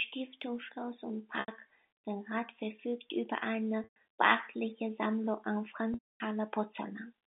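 Packet loss with pitch repetition occurs at 1.40, 3.84 and 5.94 s. Missing audio is bridged by repeating the last pitch period. The 80 and 120 ms gaps sound briefly held and buzzy. The 260 ms gap fades into silence.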